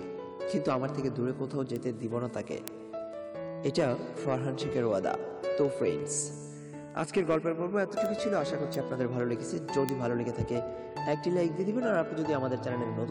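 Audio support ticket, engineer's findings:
Word clock ticks 0.16–13.09 s, about ten per second. Unlocked digital input slipping samples, clock offset near 200 ppm. Spectrogram: thin vertical lines; waveform: one-sample spikes.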